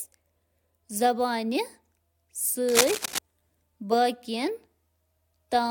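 Cable scratch noise runs from 2.69 to 3.19 s: a half-second burst of dense, irregular crackling and rustling laid over the speech at roughly the same loudness. It likely comes from a worn cable or connector being moved, its contact resistance fluctuating rapidly.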